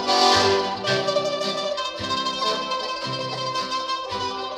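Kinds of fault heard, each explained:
Compressed frames skipped: At 2.41 s the sound lurches forward, losing a short slice. Whole compressed frames never reached the output, either missing from the stream or rejected by the decoder as damaged. With frames of about 21.3 ms, roughly two were dropped, so around 40 ms vanishes.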